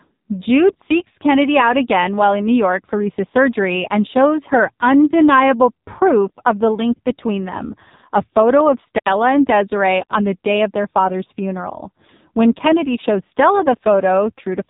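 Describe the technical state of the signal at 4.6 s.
At 4.6 s the speech carries AMR narrowband mobile codec damage, present throughout. Nothing passes above 3.8 kHz. The heavy buzzy, synthetic quality points to a very low bitrate.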